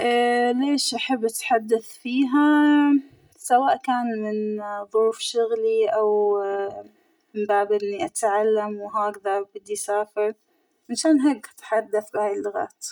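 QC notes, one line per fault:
Throughout, channel delay (comb filtering): one side is running roughly 3 ms behind the other, and once the two get folded to mono, everything the channels share cancels at evenly spaced frequencies. The first notch sits somewhere around 200 Hz, with more repeating up the spectrum. That's why the speech comes across hollow and a bit phasey, with that fixed colour that never moves.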